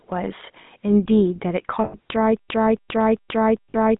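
Speech heard through the GSM full-rate codec, confined to roughly 150 Hz to 3.7 kHz, with a buzzy, gravelly roughness from pulse-driven vocal-tract modelling rather than plain band-limiting. Lost GSM frames at 1.84 to 1.96 s (100 ms) and 3.70 to 3.76 s (briefer runs of about 40 ms) hold the sound as a metallic ring instead of dropping out. From 2.37 s to the end, a stutter with silent gaps replays one 275 ms burst four times, every 0.4 s, with 125 ms of digital silence between. Unlike the ring, these are exact repeats, likely from a stalled stream retrying.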